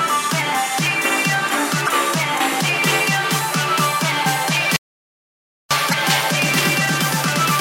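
At 1.84 to 1.89 s, damaged data in the compressed stream makes a brief glitch as the decoder loses frame sync and searches for the next frame header. From 4.76 to 5.71 s, an audio dropout to silence leaves about 0.94 s of silence with no room tone, likely from a lost input. The same damaged-data blip recurs at 5.89 to 5.94 s.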